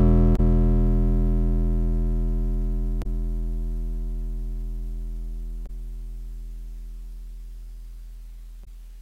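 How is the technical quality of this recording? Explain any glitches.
The music is interrupted by four short glitches from damaged data in a compressed stream, at 0.33–0.40, 2.99–3.06, 5.63–5.70 and 8.61–8.68 s. Each is a brief glitch lasting about 70 ms, where the decoder misreads corrupted frames, loses sync and resumes at the next valid frame.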